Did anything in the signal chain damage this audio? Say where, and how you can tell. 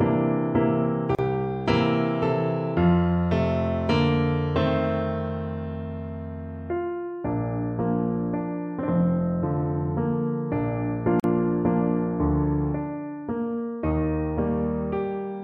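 Yes, at the codec stage: two gaps at a join of encoded pieces, at 1.15 s (about 36 ms) and 11.20 s (about 43 ms). Continuous sound drops to silence with smeared edges, then resumes exactly where it stopped. Each piece was encoded separately, and the encoder's start-up delay and last-frame padding were kept when the pieces were joined. Nothing is skipped, which sets this apart from network packet loss, where material goes missing or is patched over.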